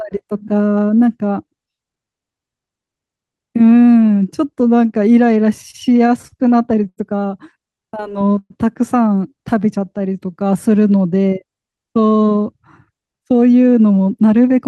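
From 5.49 to 6.99 s the speech breaks into repeated stalls, a stutter. Packets kept arriving late, so the jitter buffer ran dry eleven times. Each time the receiver stretched the last sound to bridge the wait. The longest gap is 82 ms. Together the fills add 218 ms and cover about 15% of that stretch. Nothing is lost. The speech just catches and drags in small jerks.

From 7.68 to 8.32 s comes a jitter buffer slow-down. The buffer was low and needed a reserve. So the receiver repeated single pitch periods many times over. This adds 63 ms, and the speech runs at 91% speed. The pitch stays put. Sounds are drawn out.

Right after, from 8.38 to 8.52 s, there is a call audio freeze. The last sound hangs and fades for 122 ms. About 40 ms of it is near silence. The speech then resumes where it stopped, with nothing missing. The likely cause is packets held up in transit, adding 122 ms of delay.

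A second jitter buffer slow-down runs from 9.55 to 10.69 s. Again repeated pitch periods build up the reserve. This time 100 ms is added, and the speech plays at 92% speed. It sounds slightly slowed and stretched, at unchanged pitch.

From 12.43 s to the end at 14.68 s comes a jitter buffer speed-up. The buffer now held too much audio, so the receiver cut short pieces of one or a few pitch periods. In total around 0.3 s is removed. The speech runs at 111% speed with the pitch held steady. It sounds hurried.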